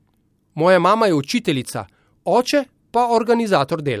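Nothing here sounds amiss at any point in the speech, so there's no technical fault to point to.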